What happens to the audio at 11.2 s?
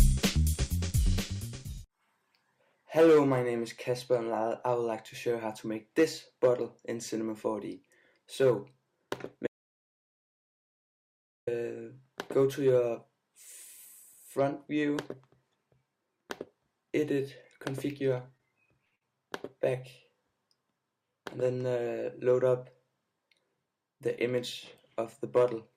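At 11.2 s the audio is in the middle of an audio dropout to silence that runs from 9.47 s to 11.47 s, about 2.0 s of lost signal. The input was likely lost or muted while recording continued, so silence was written. The sound cuts off abruptly and resumes abruptly, with no room tone in the gap. On a waveform this is a flat line, and on a spectrogram it is a fully black band across every frequency.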